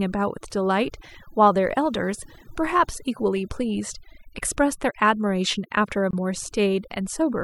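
Overdone noise removal runs through the whole speech clip. The noise reduction was set too strong. It cuts single frequency bands whenever they sit near its noise estimate, taking quiet parts of the voice too. The background drops and breaks up into twinkling specks.

From 6.11 to 6.13 s there is a gap at a join of encoded pieces. A gap of about 24 ms opens in the sound, then it resumes where it left off. Separate encodes were joined untrimmed, leaving start delay and end padding. The edges are smeared by the codec.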